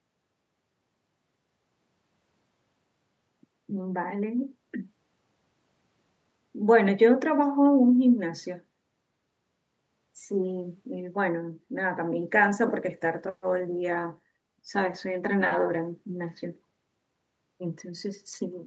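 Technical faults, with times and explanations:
12.22–17.21 s, call bitrate drop: the speech turns rougher and watery. This fits the Opus encoder being pushed from about 32 kbps down to about 18 kbps, reaching its lowest rate for roughly 3.9 s. With fewer bits, each frame is quantised coarsely, so detail smears. On a spectrogram, harmonics go blotchy and grainy below the clip's 8 kHz ceiling. The waveform shows little change.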